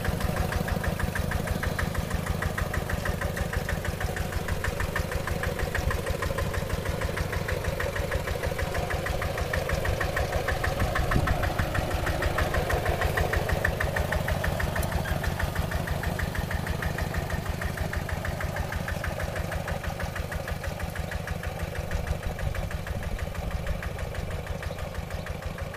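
No technical faults are audible.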